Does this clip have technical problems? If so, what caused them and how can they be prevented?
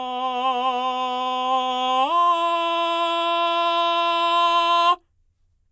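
No, nothing in this music clip calls for a fix, so there is no cause to trace and nothing to prevent.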